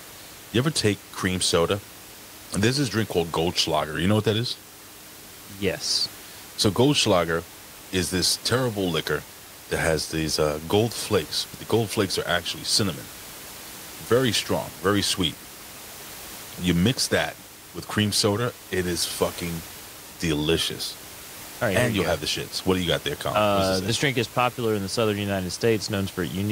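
No system faults in this speech clip; the only thing under the speech is room noise at about 18 dB down, which belongs to the recording.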